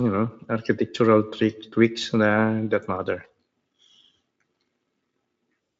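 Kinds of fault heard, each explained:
Nothing here calls for a fault line, since the speech comes across without any audible technical trouble.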